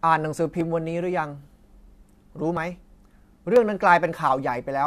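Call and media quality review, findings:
Micro-skips in the speech at 0.61, 1.59, 2.57 and 3.56 s, recurring roughly once per second. Overlap between stream segments: player trims overlapping timestamps at each 1.0 s segment boundary, discarding a few to about 19 ms of audio, so the waveform jumps.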